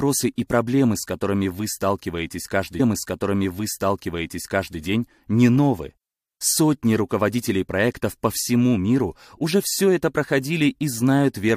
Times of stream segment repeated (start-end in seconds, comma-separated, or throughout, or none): 2.79-4.79